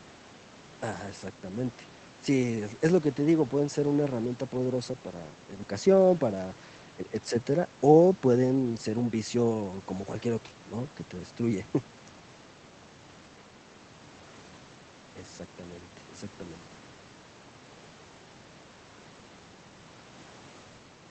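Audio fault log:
No faults heard in the recording.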